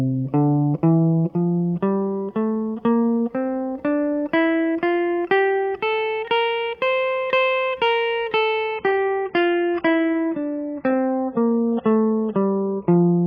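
Music, and at 8.67 s the quality drops abruptly and stays down to the end: the treble vanishes, with nothing above 6.4 kHz, and the remaining sound turns smeared and watery. This is an adaptive stream at a lower bitrate, switching from AAC-LC at 96 kbit/s to 16 kbit/s as the connection slowed, with no gap at the join. On a spectrogram the upper band cuts off as a hard horizontal ceiling from 8.67 s onward, while the waveform continues unbroken.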